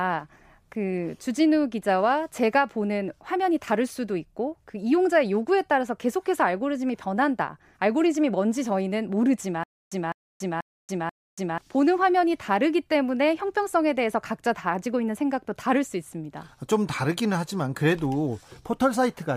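Stutter with silent gaps, 9.64 to 11.58 s: a 205 ms speech fragment repeats four times, each followed by 282 ms of digital silence, a steady 486 ms cycle. A stalled stream likely replayed its last fragment at each retry, losing the audio meant for that span.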